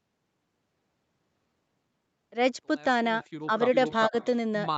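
At 3.46 to 3.51 s the speech dips by about 5 dB for roughly 50 ms, just as the fade-in from around 2.5 s is finishing. This is most likely speech suppressed in double talk: the echo canceller hears both sides at once and turns down the near talker along with what it takes to be echo. It removes level from the voice itself and adds nothing.

From 3.74 to 4.27 s an echo leak is audible as a second copy of the voice trailing 406 ms behind it, about 10 dB below the direct speech. The likely cause is a loudspeaker on the far side whose canceller let part of its microphone pickup back into the call. This differs from suppression because something is added to the sound. A displaced, quieter repeat runs underneath the speech instead of the speech itself shrinking.

Inside that echo, at 4.09 to 4.13 s, a second and deeper suppression cuts the speech by about 15 dB for roughly 40 ms. With the far side's sound playing while the near talker speaks, the canceller likely clamps down again and briefly hollows out the voice. 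All of this sits within the roughly 8 kHz band of the Opus call path.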